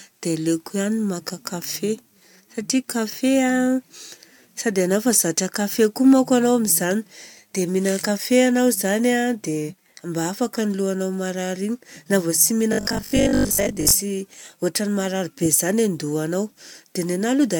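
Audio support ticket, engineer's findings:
Robotic sound from repeated short buffers, 12.73–13.93 s, after "vô tsy": likely input starvation, 20 ms chunk looped over most of the span; speech becomes metallic 50 Hz buzz.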